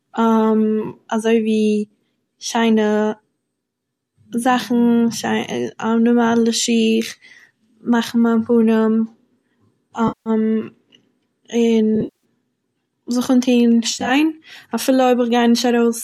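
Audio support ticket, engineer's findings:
AAC frame loss with concealment: smeared, phasey dropouts at 10.08–10.30 s, 11.96–12.24 s, and 13.90–14.11 s right after "זיך אנטוהן". The decoder patches the gaps from the last good spectrum. The sound fits ten-millisecond frames from a likely low-delay AAC stream, which carries light grain.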